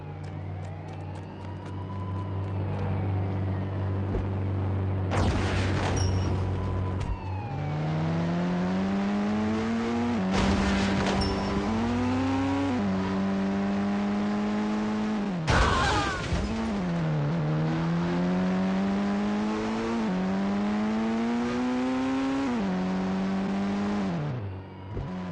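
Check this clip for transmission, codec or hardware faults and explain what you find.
Checking this clip turns up no faults to explain.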